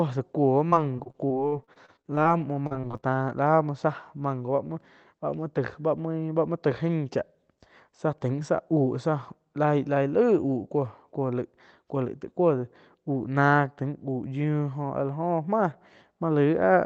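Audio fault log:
0.69–2.27 s, repeated packet loss (robotic sound): the sound turns choppy and robotic, with many brief holes up to about 41 ms each, totalling roughly 0.3 s. Each dropout is bridged by stretching the last fragment, so the patches buzz robotically while pieces of the signal are lost.
2.67–3.04 s, repeated packet loss (robotic sound): a shorter, denser burst of the same chopping, with about a third of this stretch concealed, gaps up to about 39 ms, over the Opus call path's 8 kHz band.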